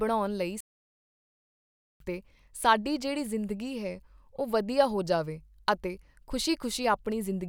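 At 0.61 s the speech cuts off abruptly in mid-flow and the output falls completely silent for about 1.4 s, picking up again at 2.00 s. This is a playback stall: the gap has no fade or noise in it, just dead air. The likely cause is the player running short of buffered data, or its playback thread being blocked, so nothing reached the output until it recovered and resumed.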